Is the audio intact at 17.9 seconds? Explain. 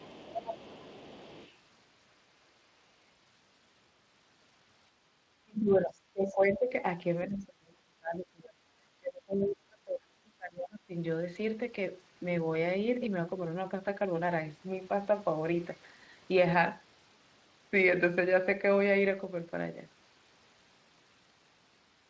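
Yes, the speech at 17.9 seconds is intact, with no fault at that moment.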